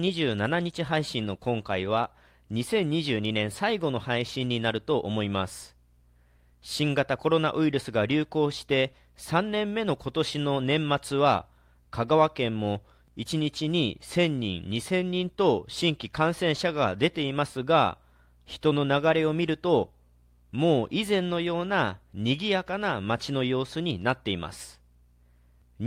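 No technical faults can be heard anywhere in this speech recording.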